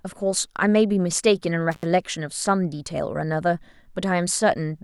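A speech recording with an intermittent contact fault between 1.72 and 1.85 s. A loose plug or cable briefly breaks the connection, so the signal drops out for about 69 ms, with crackle at the make and break edges and faint hiss during the gap.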